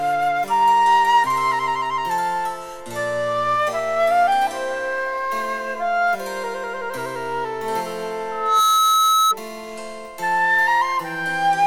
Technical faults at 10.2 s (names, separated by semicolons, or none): none